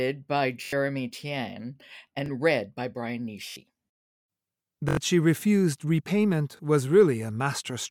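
Repeated buffer stutters in this speech clip at 0.64, 2.26 (before "read by"), 3.50, 4.89 (before "she refused") and 6.57 s: the same roughly 21 ms piece replays up to four times with hard joins, which fits a 1024-sample buffer replayed when new audio arrived late.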